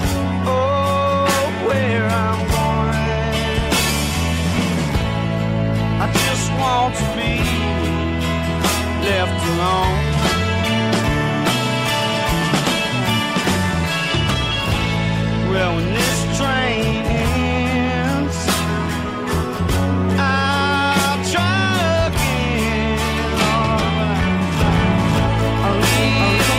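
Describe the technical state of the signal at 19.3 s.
At 19.3 s the signal is intact, with no dropout, clipping, glitch or other technical fault to be heard at that moment.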